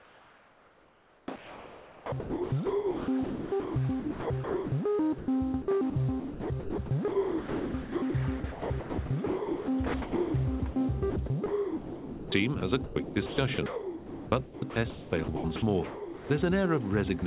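From 0.0 to 4.72 s the sound is chopped by the voice detector. The likely cause is a sender-side detector flipping between sending and pausing. About 3.8 s of this stretch is replaced by comfort noise. Real sound and a synthetic hiss alternate.

At 5.18 to 5.28 s, sound is dropped by the voice detector. About 70 ms of quiet sound likely fell below the detector's threshold and was not sent. A 100 ms patch of steady comfort noise stands in its place.

The chopping returns in five more stretches: 5.62 to 8.14 s, 8.4 to 10.34 s, 10.6 to 10.76 s, 11.1 to 12.32 s and 12.6 to 16.3 s. Comfort noise fills about 1.5 s, 1.2 s, 60 ms, 1 s and 2.2 s of them. Each likely comes from the detector toggling again. The sound breaks up. Throughout, the call codec leaves nothing above 4 kHz, which fits G.711.

A last drop falls at 17.2 to 17.22 s. A 20 ms sliver of sound is lost, likely cut by the detector, and a brief puff of comfort noise replaces it.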